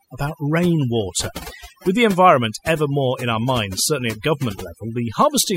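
Overdone noise removal runs through the whole speech clip. The noise reducer was set too aggressively, so frequency bands near its noise estimate are pulled down or switched off, taking quieter parts of the voice with them. Pauses fall to near silence with twinkling specks.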